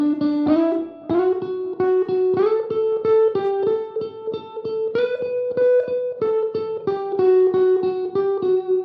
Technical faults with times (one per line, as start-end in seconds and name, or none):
none